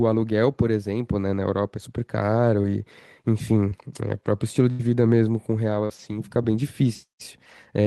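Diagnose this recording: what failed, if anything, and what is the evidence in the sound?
Short concealed packet loss on the network path, at 2.61, 3.69 and 5.85 s. Each is a brief smear. The receiver extended the last sound across 20 to 40 ms gaps.

A burst of packet loss at 4.71 to 4.81 s. The receiver held and faded the last sound, then resumed, leaving about 80 ms of audio missing.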